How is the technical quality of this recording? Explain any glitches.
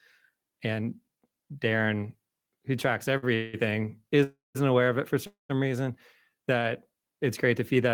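The recording is interrupted by four timing glitches in the speech, all in the middle of the clip, and no audio is lost in any of them.

Short stall from a late packet, 3.17 to 3.25 s, just after "who tracks": a packet missed its slot, the jitter buffer emptied, and the receiver held the last sound for about 51 ms until the packet arrived. The speech then resumes from the same point, so you hear a brief held sound with a faint buzz or dip. Unlike the freezes that follow, it is too short to fade or fall silent.

Call audio freeze, 3.35 to 3.55 s (also after "who tracks"), 4.23 to 4.57 s (just before "aware of it for") and 5.27 to 5.51 s: the likely cause is packets delayed in transit, which drained the jitter buffer. The receiver extended the last sound as a buzz or hiss that decays. The first freeze lasts about 187 ms and never reaches silence. The second lasts 315 ms and ends in about 160 ms of silence. 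The third lasts 227 ms and ends in about 130 ms of silence. Each then continues where it stopped, adding a gap without dropping any content.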